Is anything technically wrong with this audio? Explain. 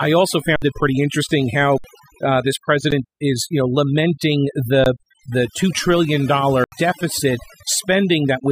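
Yes. Overdone noise removal runs through the whole clip. A noise reducer set too aggressively has cut frequency bands close to its noise estimate down or out. The background falls to near silence with twinkling specks, and quieter components of the speech were stripped along with the noise.

There are five underruns with a held sample, at 0.56–0.62 s, 1.78–1.84 s (after "it pretty interesting"), 2.91 s (after "uh this"), 4.84–4.86 s (after "is you know lamenting"), and 6.64–6.72 s. Each time the output buffer ran dry and the converter held its last value, so the sound freezes flat for 60, 60, 15, 20 and 80 ms. Live audio was lost meanwhile, roughly 70 ms at the longer gaps, so playback resumes with a jump.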